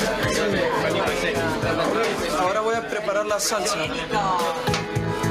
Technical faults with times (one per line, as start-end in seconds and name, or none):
0.00-5.31 gain pumping